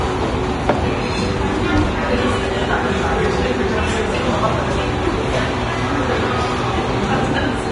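Throughout, the audio is heavily grainy and hissy below a hard 10.6 kHz ceiling, likely Vorbis compression at a bitrate near 30 kbps; unlike plain low-pass filtering, remaining treble turns noisy rather than merely dull.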